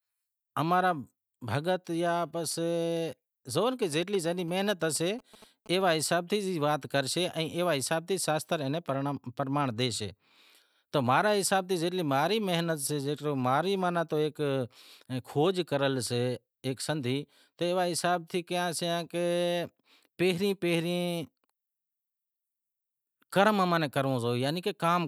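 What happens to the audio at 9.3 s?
Nothing goes wrong at 9.3 s: the speech there is intact, with no dropout, click, distortion or other fault.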